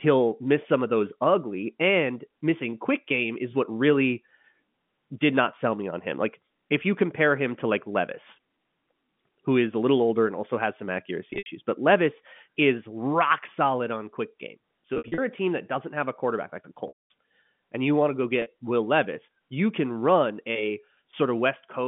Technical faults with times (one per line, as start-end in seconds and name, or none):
11.30-11.46 packet loss with pitch repetition
14.94-15.18 packet loss with pitch repetition
16.88-17.10 packet loss with pitch repetition
18.42-18.46 packet loss with pitch repetition